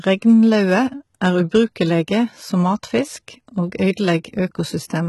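Throughout the speech, heavy low-bitrate coding, likely HE-AAC compression at around 16 kbps, rebuilds the treble from copied lower bands, leaving s sounds gritty and metallic, with nothing above 11.8 kHz.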